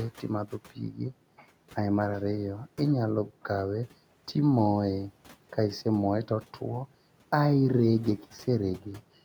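Speech cut by the noise suppressor, 0.7 to 1.13 s: the suppressor mistook quiet speech for noise, pulling it down by about 10 dB, so brief fragments sound swallowed.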